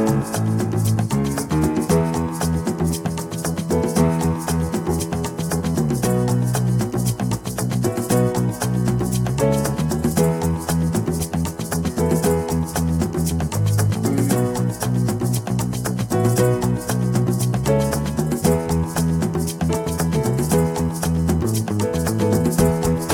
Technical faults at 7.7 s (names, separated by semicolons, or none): USB whine